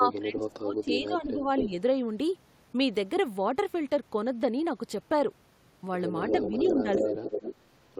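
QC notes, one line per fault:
0.0–1.47 s, speech suppressed in double talk: the speech dips by around 15 dB in patches adding up to about a second. The likely cause is an echo canceller that heard both sides at once, could not separate its own talker from the returning echo, and turned everything down.
1.57–1.68 s, echo leak: a brief delayed copy of the speech arrives 238 ms late, a few dB below the main signal. The likely cause is a loudspeaker's output reaching the far microphone and slipping past its echo canceller.
6.27–7.55 s, echo leak: a longer stretch of the same 238 ms delayed copy, now about as loud as the speech itself. The likely cause is again loudspeaker sound that the echo canceller did not fully remove.
6.32–7.26 s, speech suppressed in double talk: during that echo the speech drops by around 10 dB over roughly 0.7 s, likely because the canceller again treated overlapping sound as echo and suppressed the talker along with it.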